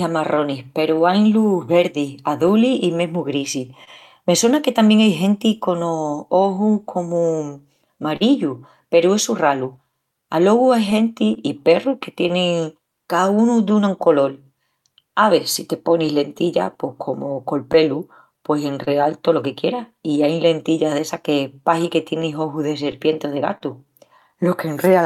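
Throughout the speech there is clock drift between sender and receiver: the sender's clock runs roughly 3 percent slow, so the receiver's jitter buffer keeps draining and must be topped up. This produces small, unevenly spaced timing hiccups from start to finish.

From 0.22 to 24.89 s, repeated timing corrections stretch playback to 98 percent speed. Short pieces are repeated to fill the shortfall, adding about half a second in total. The result is a slightly unsteady, dragging tempo with faint stutters.

Scattered short gaps occur in three stretches. From 1.33 to 6.2 s there are around ten, covering about 70 ms, none longer than about 30 ms. From 8.16 to 12.32 s there are about five, again about 70 ms in all, the longest roughly 40 ms. From 16.06 to 23.62 s there are around ten more, about 150 ms, each under about 30 ms. Late or lost packets were patched by extending the preceding sound, which leaves brief ticks and smears.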